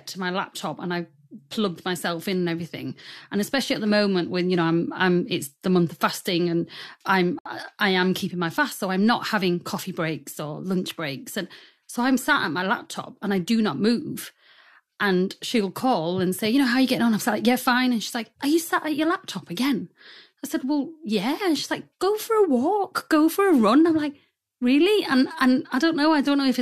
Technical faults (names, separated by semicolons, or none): gap at a join of encoded pieces